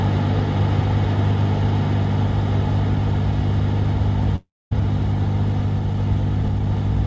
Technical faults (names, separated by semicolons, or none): long network dropout